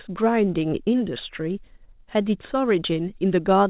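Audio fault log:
throughout: clock drift between sender and receiver. The sender's clock runs slow, by roughly 4 percent. The receiver's jitter buffer keeps draining as a result. It must stretch the audio to avoid running dry. Small timing hiccups recur at uneven intervals.
0.41 to 3.65 s: repeated timing corrections. The receiver repeats short pieces to keep pace with the slow sender. Tempo settles near 96 percent speed, adding roughly 150 ms overall. Each edit is tiny. Together they give slight stumbles within the 4 kHz-limited G.711 call band.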